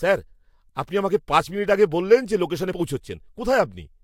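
Compressed frames skipped at 2.71 s: a couple of frames of the encoded speech never reach the output, probably missing or rejected as damaged. The audio jumps ahead by about 50 ms.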